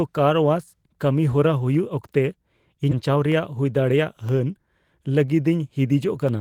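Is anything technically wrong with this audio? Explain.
Yes, the speech in this clip has three distinct technical faults.

From 0.74 s to 6.29 s a tick recurs once every second, about seven in all, each heard only while sound is present. These are periodic USB or driver dropouts. At a fixed one-second interval something stalls the USB bus or the audio driver, and a sliver of roughly half a millisecond is lost and replaced with silence. Those tiny gaps in an otherwise continuous waveform produce the clicks.

Between 2.91 s and 2.93 s the audio lurches forward with no gap. The material on either side is butted together, so about 0.4 s of speech is simply missing. This is a skip ahead. A block of audio was discarded, either in transit or by an overflowing jitter buffer, while later audio was already queued. Playback jumped straight to the waiting material, and the delay shrank by about that same amount.

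From 3.09 s to 3.72 s the speech sounds rushed, running at about 109% of its normal rate while the pitch stays unchanged. This is a jitter buffer speed-up. With more audio buffered than its target, the receiver trimmed short pieces of one or a few pitch periods over and over, removing about 70 ms in total, to pull the latency back down.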